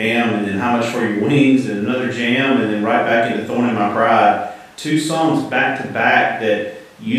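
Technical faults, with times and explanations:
Nothing to flag here: there are no technical faults anywhere in this bit of speech.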